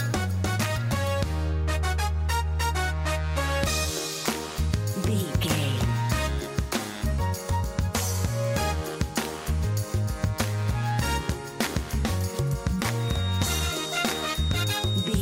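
A speaker-to-microphone loop, likely poised at the edge of feedback, leaves a feedback whistle from 12.94 s to the end: a thin 3.7 kHz tone, slowly swelling and fading, about 10 dB below the sound.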